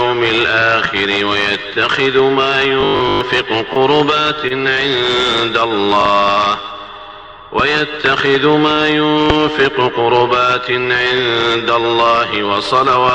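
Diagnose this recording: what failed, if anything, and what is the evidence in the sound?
Robotic sound from repeated short buffers, 2.81 to 3.21 s, a driver or buffer stage fault. For those 0.4 s the sound takes on a rigid, metallic 50 Hz buzz that still loosely follows the underlying audio. A 50 Hz buzz fits a roughly 20 ms block being replayed over and over. The likely cause is input arriving too seldom, so the software refills the gap by repeating its last block while most of the real audio in that span is skipped.

Short stall from a late packet, at 3.73 to 3.79 s and again at 4.48 to 4.53 s, on the network side. Each time the sound hangs for about 24 ms, held slightly too long, and then resumes exactly where it left off. Nothing is lost. A packet missed its slot, the jitter buffer ran dry, and the receiver stretched the last audio until the packet arrived. Each stall pushes the playback delay about 24 ms later.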